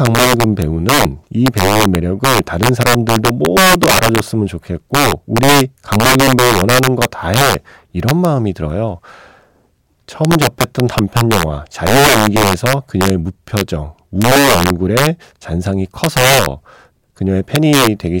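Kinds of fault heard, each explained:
Integer overflow: violent, sharp cracks burst out on the loudest syllables throughout this speech, much harsher than clipping. The signal is pushed about 4 dB past the largest integer, so a small share of peaks wrap to the opposite sign instead of being limited.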